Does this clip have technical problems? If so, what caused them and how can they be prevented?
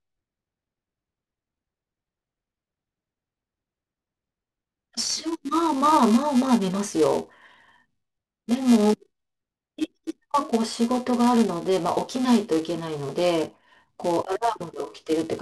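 Yes. A buzz at about 375 Hz runs through the whole speech clip, rising and falling with the level of the voice. The filter restarted on every block, which fits a 128-sample block: each block starts from zeroed state, leaving a small transient. Preserve filter state between blocks.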